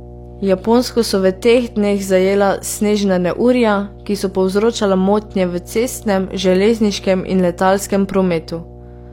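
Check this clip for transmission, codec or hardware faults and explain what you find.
Mains hum runs through the whole speech clip: a ground loop or transformer leaks the 60 Hz supply in, giving a steady low drone roughly 20 dB below the speech, seen as an unbroken 60 Hz line on a spectrogram.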